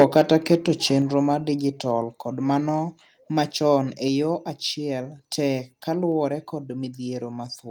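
Microphone overload runs from 0.0 to 0.54 s of this speech recording. The loudest peaks are flattened against the converter's ceiling, giving a harsh, crackly edge to the opening syllables. The likely cause is an input level set about 6 dB too hot, so the converter ran out of headroom and sliced the tops off a small share of the waveform, around 2 percent of it. Microphone volume stepped down appears at 0.02 s and again at 1.02 s. Each time, the speech and the background fall together by about 3 dB in one abrupt notch. This likely comes from the call software reacting to the overloaded input by cutting the device's gain in a single step, first almost as soon as the distortion starts and again about a second later.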